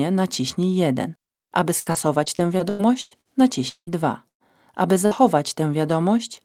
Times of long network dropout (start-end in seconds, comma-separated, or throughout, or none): 3.69-3.90